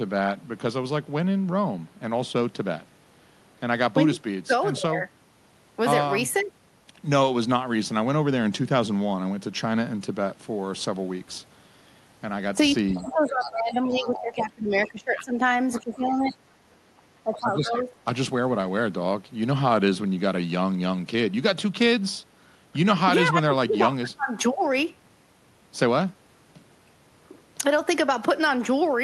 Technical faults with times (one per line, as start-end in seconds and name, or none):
12.91-14.22 other side's voice leaking through
13.04-15.39 speech suppressed in double talk
14.86-15.24 other side's voice leaking through
15.72-16.33 other side's voice leaking through
15.79-16.36 speech suppressed in double talk
17.23-18.06 speech suppressed in double talk
17.77-17.81 other side's voice leaking through